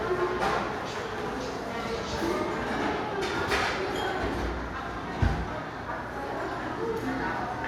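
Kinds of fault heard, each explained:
No technical faults can be heard in this recording of sounds. There is nothing to list for it.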